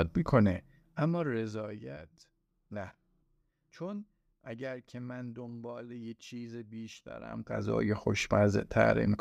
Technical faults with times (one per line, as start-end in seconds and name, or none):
none